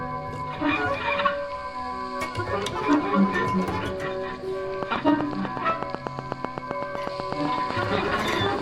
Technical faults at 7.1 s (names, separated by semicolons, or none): train of clicks